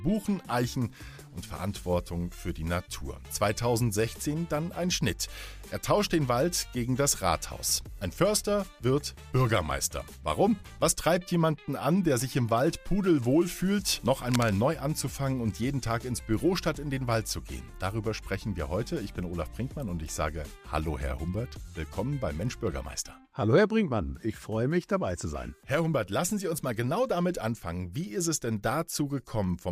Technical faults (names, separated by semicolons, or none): cable scratch noise